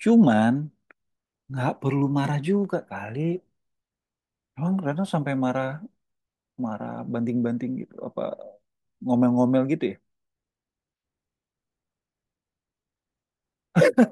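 Nothing in the speech stood out as a technical problem on listening.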